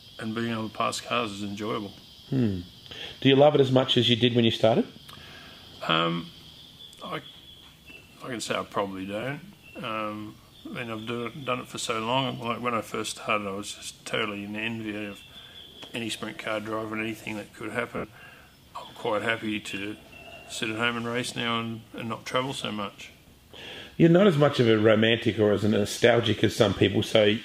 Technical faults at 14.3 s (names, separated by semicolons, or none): none